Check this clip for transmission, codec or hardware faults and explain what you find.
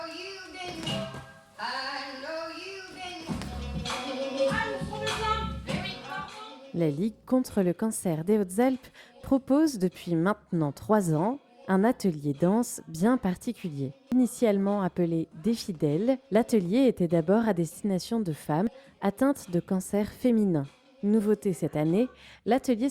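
Two short discontinuities are audible, at 14.12 s and 18.67 s. Each is a jump forward in the sound, losing about a tenth of a second. The likely cause is a dropped buffer (overrun), where unread samples were overwritten and the surviving audio spliced together.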